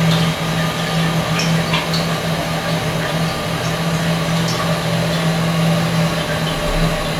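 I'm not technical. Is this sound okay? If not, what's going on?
Yes, this sound is fine, with nothing wrong to hear.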